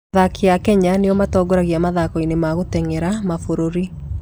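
Speech recording, no technical faults found on listening.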